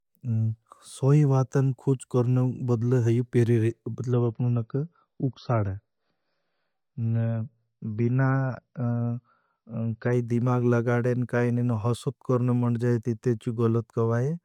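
Adaptive stream at a lower bitrate, 4.13 to 10.13 s: the speech abruptly loses everything above 5.9 kHz, pointing to a switch to a leaner MP3 version, with no gap.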